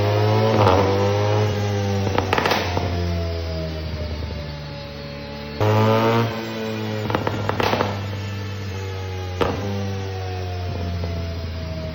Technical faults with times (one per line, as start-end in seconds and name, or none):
none